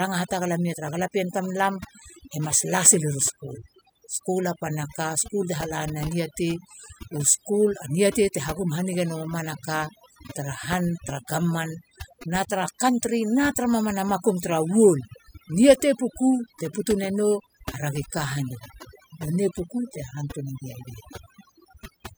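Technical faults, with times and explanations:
Throughout, overdone noise removal: the noise reduction is set too strong, clamping bands near the noise floor so the background goes twinkly-silent and quiet parts of the speech are lost with it.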